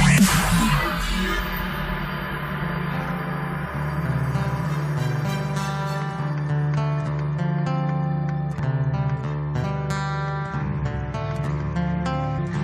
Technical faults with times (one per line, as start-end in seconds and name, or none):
8.58 compressed frames skipped
9.63 compressed frames skipped
12.37 compressed frames skipped